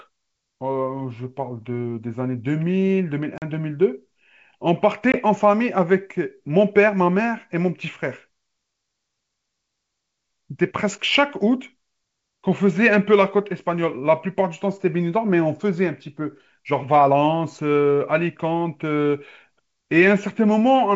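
At 3.38 to 3.43 s and again at 5.12 to 5.19 s the speech hits packet loss on an ADPCM call, about 40 ms then 20 ms, a couple of packets and then one, filled with silence. The wideband G.722 path stays clear to 7 kHz, so the hard-edged holes stand out as blank vertical gaps on a spectrogram and flat lines in the waveform. With the decoder's predictor and step size out of step, the speech returns with brief distortion.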